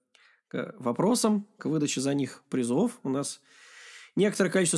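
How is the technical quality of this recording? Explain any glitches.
No technical faults are audible anywhere in this speech recording, so there are no glitches to explain.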